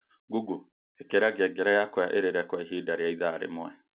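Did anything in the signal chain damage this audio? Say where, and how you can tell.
No, nothing in the signal chain damaged this audio.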